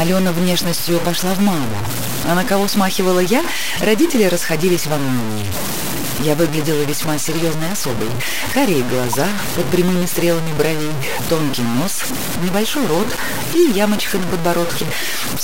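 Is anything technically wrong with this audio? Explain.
Yes, there are two faults. Throughout, a coarse grainy distortion tracks the sound: quiet passages turn gritty and the faintest parts sputter or vanish. This is likely low bit depth without dither. Truncating to about 3 bits leaves quantization error nearly as loud as the signal itself.

From 9.12 to 9.19 s, a short, fairly loud glitch cuts in. This is a corrupt frame decoded: damaged bits across a few compressed frames were played anyway, so misread values put energy at the wrong frequencies for those frames' duration.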